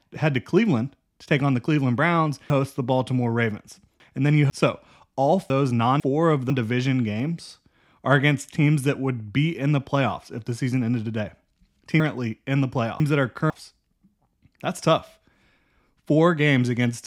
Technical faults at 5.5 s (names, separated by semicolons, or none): chunks out of order